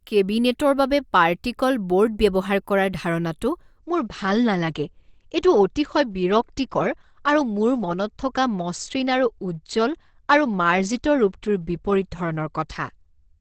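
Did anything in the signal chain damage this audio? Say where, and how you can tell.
Yes. An adaptive stream dropped to a lower bitrate from 3.78 s to the end: at the network and codec stage, the treble abruptly stops at 8.7 kHz with no gap, and artefacts thicken, which fits a connection slowdown forcing a switch to a much leaner encoding.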